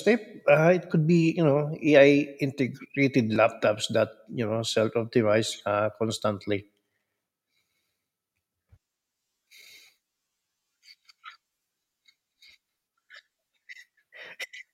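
A repeated buffer at 3.35 s interrupts this speech clip with a brief click. New audio failed to reach the output in time, so the device played its last block again, once, and the same tiny slice sounds twice with a hard join between the copies. The repeated piece is so short, which fits a 10 ms buffer, that it registers as a click rather than a stutter, and roughly 10 ms of the real signal is lost.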